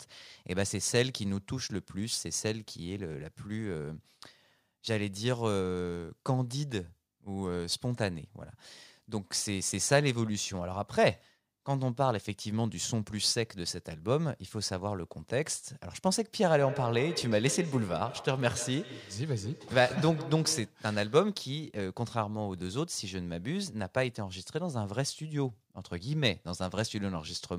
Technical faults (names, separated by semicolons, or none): feedback echo between two devices